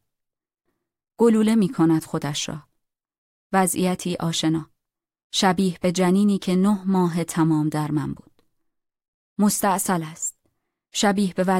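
Nothing stood out as a technical fault on listening to this speech recording.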